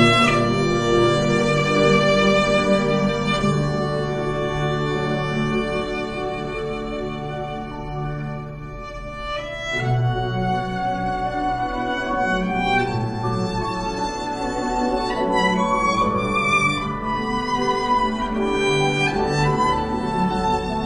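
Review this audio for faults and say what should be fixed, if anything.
Nothing here needs fixing; no faults turned up.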